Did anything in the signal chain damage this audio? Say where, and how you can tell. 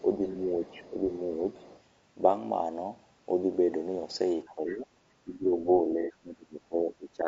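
Yes. Throughout the clip the speech sounds rough and grainy, with noise between the harmonics. This points to the codec stage: low-delay AAC compression, likely AAC-ELD at a low bitrate.

AAC frame loss with concealment shows as a smeared, noisy patch at 0.32–0.36 s and again at 6.02–6.12 s. The decoder filled the missing frames from the last good spectrum.

Speech suppressed in double talk shows as level dips at 0.59–1.12 s, 4.46–4.87 s, 5.24–5.68 s and from 5.87 s to the end. The dips deepen from slight to deep. The likely cause is call-processing echo control ducking the talker.

The other side's voice leaking through is audible at 0.66–0.90 s and 1.57–1.81 s. It is faint, well below the speech. This is likely residual loudspeaker echo that the echo canceller did not remove.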